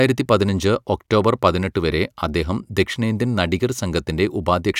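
Nothing goes wrong anywhere in this short bit of speech, so there's no technical fault to point to.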